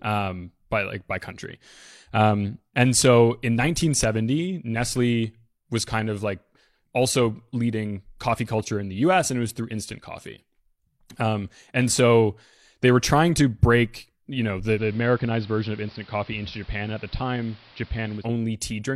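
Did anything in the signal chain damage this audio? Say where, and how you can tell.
Yes. At the receiver, digital radio blending to analogue runs from 14.72 to 18.27 s, after "break you know the". A 106 ms cross-fade drops to the AM feed: level down about 4 dB, and hiss roughly 25 dB under the speech.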